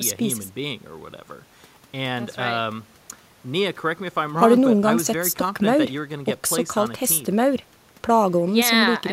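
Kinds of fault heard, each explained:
No technical fault can be heard anywhere in this speech recording.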